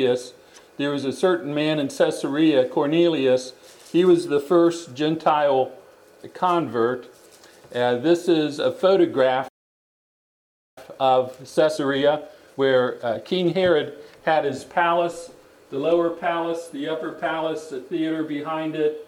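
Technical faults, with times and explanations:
9.48–10.78 s, playback stall: sound halts mid-flow for about 1.3 s, likely the player starving for data; the waveform shows a flat, empty gap.
10.78–13.78 s, time-compressed catch-up: audio runs hurried at 1.25x with unchanged pitch; spectrogram shows compressed timing, harmonics at steady height.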